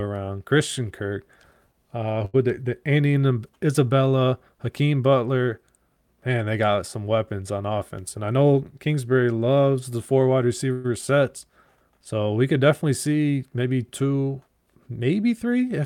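Around 2.25 to 2.36 s, just before "the the", there's a short stall from a late packet: the jitter buffer ran dry, so the last sound gets stretched by 83 ms as a buzz or dip before picking up where it left off, with nothing lost.

Right after "got some weapons on", from 7.97 to 8.62 s, a jitter buffer speed-up trims out around 70 ms in little pitch-period chunks, so the audio runs at 110% speed, same pitch but noticeably hurried.

Then after "loves the four wide", at 10.72 to 10.87 s, the sound hangs on as a fading buzz or hiss for 118 ms before carrying on, with nothing skipped. That's likely a call audio freeze, with packets held up in transit and the buffer running empty.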